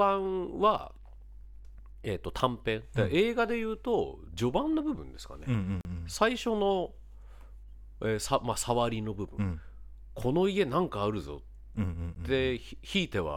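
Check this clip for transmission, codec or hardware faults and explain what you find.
Two blocks of digital silence interrupt the speech. The first runs from 5.81 to 5.85 s, a 40 ms hole. The second, at 12.15 s, lasts about 15 ms and is heard as a tick. In each, a run of samples dropped to silence, most likely because the output buffer wasn't filled in time. The signal switches off and on with no fade. That abrupt, truly silent gap sets it apart from a codec's concealment, which fills losses with smeared or repeated sound.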